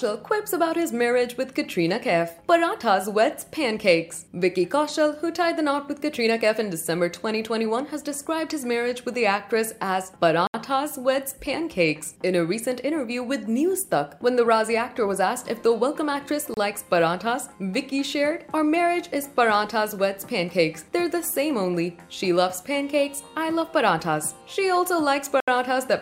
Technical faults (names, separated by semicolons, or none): Bluetooth stall